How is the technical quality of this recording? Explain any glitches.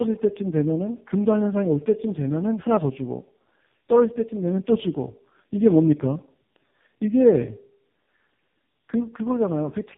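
The quality is poor, with one fault that runs the whole way through. Tandem speech coding: the speech sounds as if it passed through two low-rate speech codecs in a row, plausibly G.729A and then AMR-NB at around 5 kbit/s, with a plain G.711 link between them. Each coder re-encodes the previous one's errors, so the voice comes out rough, muffled and warbly. On a spectrogram, nothing appears above 3.6 kHz, and harmonics look smeared and blotchy rather than crisp.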